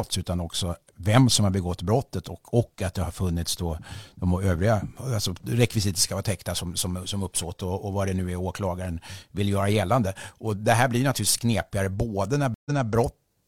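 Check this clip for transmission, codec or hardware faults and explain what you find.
One transmission fault is present: a stream reconnect between 12.54 and 12.89 s. The connection dropped, playback fell silent for 114 ms, and the player reconnected and started a fresh decoder partway through the stream. Because the server resent a burst of earlier data, the audio resumes 232 ms behind where it stopped, so a short stretch of the speech is heard twice. The first frame after the gap fades in.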